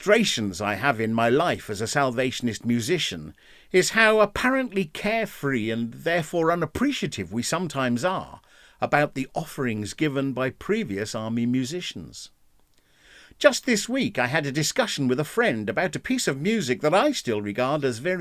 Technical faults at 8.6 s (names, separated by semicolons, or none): none